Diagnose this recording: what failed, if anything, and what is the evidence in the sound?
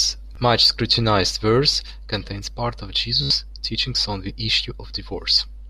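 Bluetooth stutter on the wireless link: a brief catch at 0.35 s and a buzzing repeat from 3.23 to 3.30 s, about 73 ms, which fits about five lost packets. The receiver replayed its last buffer, so the waveform shows identical short segments and the spectrogram shows evenly spaced vertical striping.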